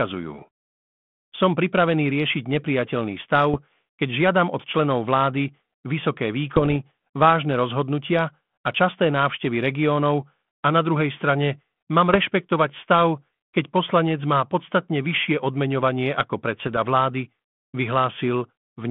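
Bit errors on an ADPCM link at 3.54 to 3.60 s, 6.55 to 6.77 s, 12.10 to 12.16 s and 16.59 to 16.78 s knock the decoder's step size and prediction off track, so the speech gets pops, rough bursts and brief level jumps.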